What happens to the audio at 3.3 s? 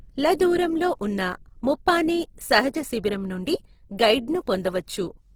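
At 3.3 s the speech has the grainy, rough texture that runs through the whole clip, likely from Opus compression in its CELT music mode at a low rate, one that fits roughly 16 kbps. Short of bits, the encoder preserves each band's energy but fills its fine detail with folded copies of lower bands or noise, so tones turn coarse and gritty. Unlike MP3 damage, there are few spectral holes and less swirling, and the bandwidth stays full, reaching about 20.2 kHz.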